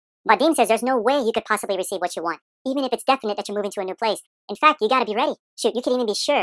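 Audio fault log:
Throughout: wrong sample rate. The speech runs fast and sounds high and hurried, with speed and pitch raised together by 1.5 times, about 7 semitones. This fits audio recorded at 16 kHz being played back at 24 kHz with no rate conversion.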